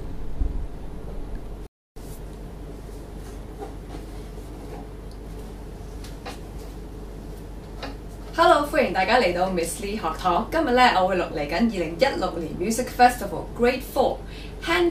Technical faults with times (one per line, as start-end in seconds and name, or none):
1.67-1.96 playback stall